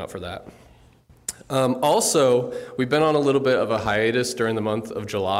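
No technical faults can be heard anywhere in the clip. Nothing in the audio points to a problem in how it was captured or delivered.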